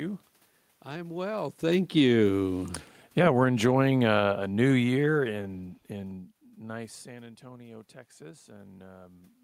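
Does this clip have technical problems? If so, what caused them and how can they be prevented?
Yes. Automatic gain falling occurs from 1.23 to 3.51 s, cutting level by about 9 dB, and again from 4.15 to 5.94 s, by about 4 dB. Gain control judged the input too loud and eased down. The room noise sinks with the speech, unlike the talker moving around 1.5 s, which shifts only the speech. Slower, gentler gain settings would prevent this.

Automatic gain rising runs from 6.73 s to the end, after the input dropped by about 18 dB when the talker moved away around 6.5 s. The gain climbs gradually, and the background swells along with the speech, which a talker returning would not cause. A fixed manual gain would prevent this.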